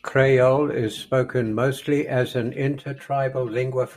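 From about 2.78 s, right after "spoken mostly as an", and through to the end, there's channel delay with comb filtering. One side lags the other by roughly 5 ms, so the mono sum cancels at evenly spaced notches starting near 100 Hz, and the speech turns hollow and phasey.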